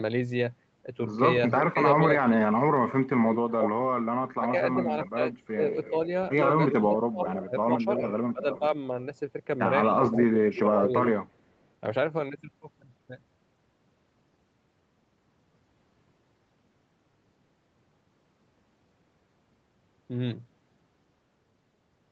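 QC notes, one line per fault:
1.50 to 10.60 s, echo leak: delayed copies of the speech come back at 1.50–1.63, 4.47–6.76, 8.08–8.58 and 10.17–10.60 s, each trailing the original by about 0.36 s, roughly 10 dB down (closer to 15 dB down around 8.1 s). That steady lag points to a far end on a loudspeaker whose echo canceller likely missed part of what its mic picked up and sent it back.
1.73 to 10.93 s, speech suppressed in double talk: while the other side is talking, the speech dips hard and drops out in pieces. Between 1.73 and 8.73 s that adds up to around three seconds, with drops of around 25 dB at worst. At 10.05–10.93 s there's a shorter patch of under a second, dipping around 20 dB. The echo canceller likely couldn't separate this talker from the returning echo and turned both down together.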